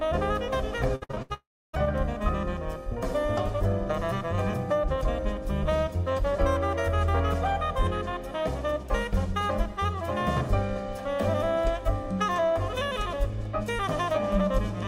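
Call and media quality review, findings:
Repeated packet loss (robotic sound), 0.95 to 1.32 s: choppy stretch with five short holes, longest about 73 ms. Jitter buffer concealment keeps extending the last sound, covering roughly 60% of the span.

Dead air, 1.34 to 1.75 s: a fading buzz or hiss, then about 0.31 s of silence, and the audio resumes with roughly 0.4 s missing. Likely a long network dropout right after the choppy burst.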